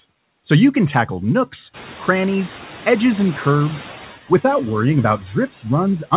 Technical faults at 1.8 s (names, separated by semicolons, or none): noise suppressor artifacts; noise suppressor catching up